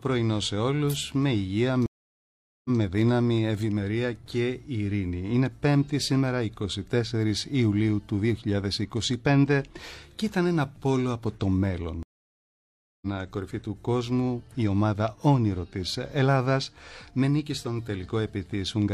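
A stream reconnect breaks playback twice. At 1.86–2.79 s, 787 ms of silence ends with a fresh decoder resuming 139 ms earlier; at 12.03–13.07 s, 989 ms of silence resumes about 0.7 s later, skipping material.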